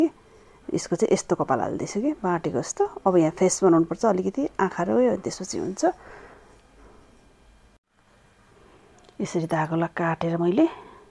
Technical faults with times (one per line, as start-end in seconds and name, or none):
none